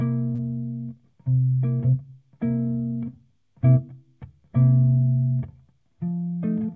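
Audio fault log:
0.35–0.41 s, short concealed packet loss: a brief smear where the sound wobbles and blurs. About 30 ms of audio missed the decoder's deadline, so the receiver extended the preceding sound for 33 ms before blending back into the real signal, over the G.722 call path's 8 kHz ceiling.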